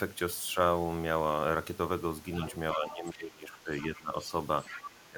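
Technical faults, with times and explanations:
2.47–2.56, 2.72–2.78, 3.11–3.15, 3.75–4.0 and 4.63–4.82 s, other side's voice leaking through: faint scraps of a second voice, well below the talker, likely left behind by the echo canceller; this adds a voice rather than removing one.
2.73–3.7, 3.88–4.15 and 5.06–5.17 s, speech suppressed in double talk: the talker's own voice drops by up to about 20 dB while the other voice is present, likely because the echo canceller treated both voices as echo.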